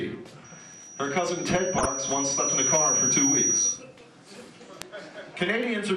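The whole clip has a dull, gurgly, granular edge. That's most likely MP2 compression starved of bits, around 80 kbps, so the upper sub-bands keep dropping out and what's left sounds coarse. At 0.44 s a loudspeaker feedback squeal starts: a single 5.8 kHz tone where the mic is hearing its own speaker. It swells over roughly two seconds to sit a few dB above the sound and cuts off at 3.84 s. At 0.74 s there's a bit error spike, one flipped bit that jumps a sample and gives a sharp click with no relation to the sound. From 1.54 to 1.86 s you get DAB burbling, a patch where bit errors slipped past error correction and put short blips of noise into individual sub-bands for a dozen or so frames. A second, shorter burble comes at 4.01 to 4.06 s. Two more bit error spikes follow at 4.82 s and 5.63 s, each a brief tick, covering three samples and two samples respectively.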